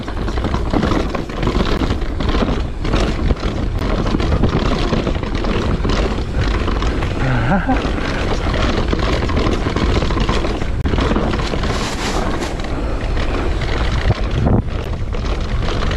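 USB whine runs through the whole clip as a steady 1 kHz tone about 45 dB below the signal. The bus's 1 ms frame activity leaks in through power or ground and becomes a fixed-pitch whine.

Gaps between stream segments occur at 1.77 s, 3.79 s, 4.81 s, from 10.81 to 10.84 s, and at 14.84 s. Timestamps leave holes between 1-second segments that are filled with silence, giving hard-edged dropouts of 17.7, 18.6, 4.5, 28.1 and 13.6 ms.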